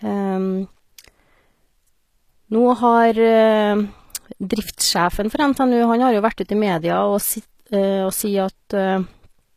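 Throughout, the speech carries plainly audible HE-AAC compression, likely from a low-bitrate encode near 24 kbps: treble is synthesised, so s sounds turn gritty and lispy, with nothing above 14.9 kHz.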